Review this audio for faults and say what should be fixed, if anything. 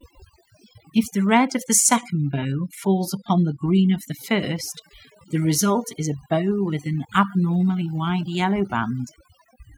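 Overdone noise removal runs through the whole clip. The noise reduction is working far too hard: every frequency band that sits near its noise estimate is pushed down or cut, so the background drops and breaks up into twinkling specks, and the softer parts of the speech are cut along with it. Unlike a low-bitrate codec, the damage follows the noise floor. Lower, gentler reduction settings on the original recording would fix it.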